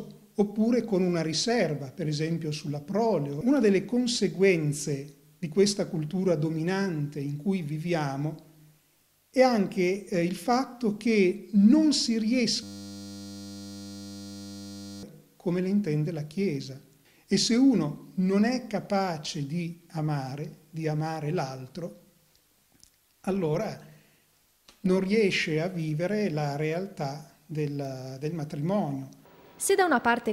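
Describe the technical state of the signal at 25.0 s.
At 25.0 s the audio is intact, with no audible fault present.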